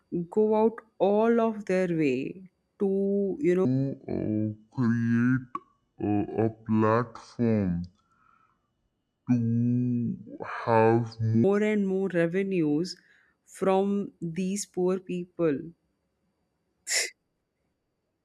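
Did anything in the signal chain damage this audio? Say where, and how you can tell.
Yes. From 3.65 s to 11.44 s the speech drops into a section at the wrong speed: it runs at 0.635 times normal rate, so it is slowed and sits about seven semitones lower, deep and dragging, before snapping back. Speed and pitch shift together, which points to a likely resampling or clock mismatch at the editing or playback stage. On a spectrogram the harmonics and formants compress downward and stretch out in time; the waveform's syllable envelopes widen across that span.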